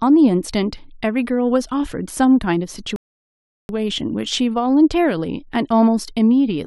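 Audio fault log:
2.96–3.69 s, rebuffering stall: the speech just drops into silence for about 0.73 s, then carries on from exactly the point where it stopped, with nothing skipped or repeated. That's the player running out of downloaded audio and sitting idle until the next chunk shows up. Because playback pauses rather than jumping ahead, no sound goes missing. You just get a dead gap that stretches the clip by roughly three-quarters of a second.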